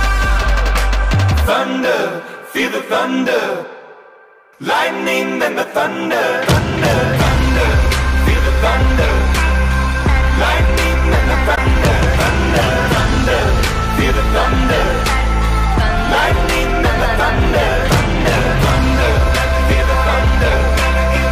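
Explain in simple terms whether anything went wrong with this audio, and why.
One brief problem occurs from 11.55 to 11.58 s: a corrupt frame concealed. A tiny chunk of the compressed audio was damaged. The player detected this and covered the spot with silence or a blurred copy of the sound just before it, which fits a single damaged frame.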